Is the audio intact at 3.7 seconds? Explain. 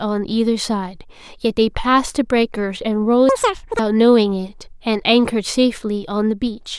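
No. At 3.7 seconds the speech is inside a stretch of audio read two samples at a time (double speed), running from 3.29 to 3.79 s. The reader treats each pair of samples as a single frame, as if the stream had two channels or samples twice as wide. The sound therefore plays at 2x speed and jumps 12 semitones, a full octave higher.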